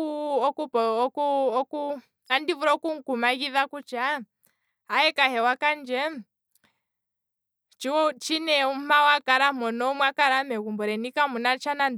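No audible technical faults anywhere in the recording; nothing to flag.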